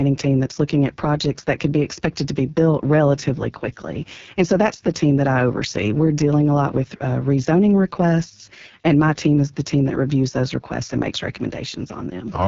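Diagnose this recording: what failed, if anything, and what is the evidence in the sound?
The failure is at the codec stage: an AMR wideband (HD Voice) codec running at its bottom rate throughout the speech. The voice sounds rough and raspy from start to finish, with a buzzy, gritty texture, which points to the lowest mode, about 6.6 kbit/s. A spectrogram shows a flat ceiling near 7.1 kHz, with a noise-like band just beneath it rather than true harmonics. Too few bits reach the pulse-driven vocal tract model, so each frame's excitation comes out coarse.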